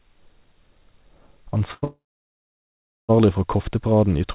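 A short stall from a late packet occurs at 1.58 to 1.62 s and again at 1.74 to 1.84 s. Each time the jitter buffer ran dry and the last sound was held for 18 ms, then 83 ms, before the audio resumed with nothing lost. A call audio freeze follows directly from 1.84 to 3.11 s, likely from packets held up in transit. The final sound is stretched into a brief fading buzz, then about 1.1 s of silence, inserting roughly 1.2 s of gap before the sound picks up where it stopped. Throughout, the narrowband telephone-style tone with nothing above 4 kHz fits a G.711 mu-law path at 64 kbps.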